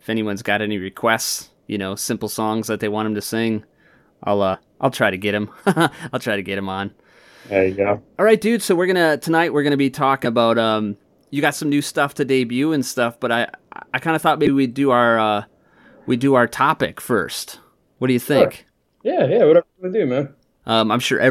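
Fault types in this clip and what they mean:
Compressed frames skipped: Coded frames are lost, so the speech leaps ahead by up to about a tenth of a second. The jumps come at 4.53 s and 14.45 s.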